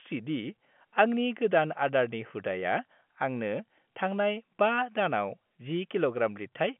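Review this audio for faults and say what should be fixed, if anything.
Nothing needs fixing: the speech sits in a telephone band of about 150 Hz to 3.4 kHz with nothing above 3.7 kHz, which is what G.711 telephone coding produces and fits a 64 kbps A-law line.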